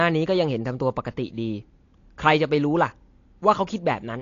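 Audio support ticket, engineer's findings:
Dull, smeared speech throughout, with audible warbling and fizzy sibilants. Nothing above about 7.1 kHz. Likely AAC compression (AAC-LC) at a low bitrate, consistent with roughly 32 kbps. The coarsely quantised spectrum loses its top band and leaves gaps or substituted noise.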